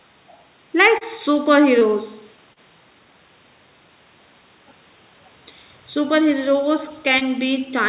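It's speech, with short concealed packet loss at 0.98, 1.79, 2.53 and 7.18 s: about 30 ms went missing each time, and the receiver patched each gap with a brief smeared continuation.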